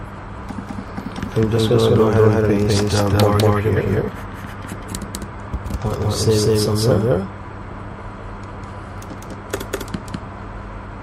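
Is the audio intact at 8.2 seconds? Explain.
No, at 8.2 seconds you're hearing a doubled audio track, and it runs through the whole clip. A second full-band copy trails roughly a fifth of a second behind at about equal loudness, with no decay or room colour, most likely from a slower duplicate capture path.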